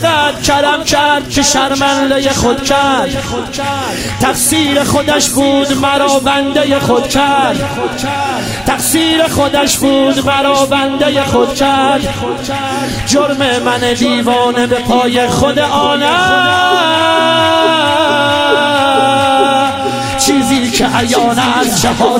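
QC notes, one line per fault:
15.16 s, dropped samples: A single sharp click. It is very brief, with no gap or missing sound around it. It shows as a thin vertical line across the spectrum. The likely cause is a tiny run of samples lost from the stream, around a tenth of a millisecond. The waveform then jumps straight from one value to a later one. That instant step holds energy at every frequency, so it is heard as a click.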